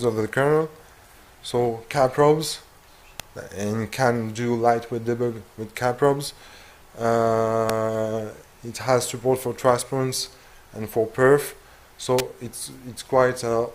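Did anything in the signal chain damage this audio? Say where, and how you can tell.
Yes, in the analogue wiring: three electrical switching spikes land at 3.20, 7.70 and 12.19 s, each a sharp snap lasting under 20 ms and peaking around -5 dBFS. On a waveform each is a near-vertical needle; on a spectrogram, a thin full-height vertical stripe. This is likely a nearby switch, relay or static discharge arcing and inducing a brief transient into the line before conversion.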